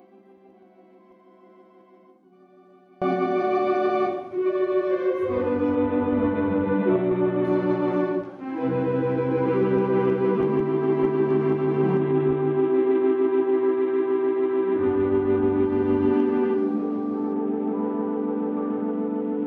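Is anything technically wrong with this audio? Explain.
Yes. From 0 to 3.02 s the sound collapses by about 31 dB to a faint residue, likely one channel inverted, so the shared content cancels when the stereo pair is summed to mono.

From 5.75 to 7.45 s, 12.00 to 15.65 s and 17.33 s to the end, the treble dulls and gritty noise appears. This is a Bluetooth SBC bit pool drop: the link starves the encoder, which fits a fall from bit pool 28 to 7, around 66 kbps.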